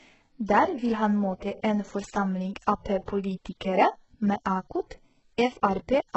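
From start to finish the speech has that smeared, synthetic top end you get from HE-AAC compression, and the damage is heavy. Nothing comes through above 8 kHz, and the treble that is there sounds rebuilt rather than captured: upper bands seem copied up from lower ones, so s sounds come out gritty, metallic and lispy. The likely culprit is spectral band replication at a very low bitrate, the kind of sound that points to something around 8 kbps.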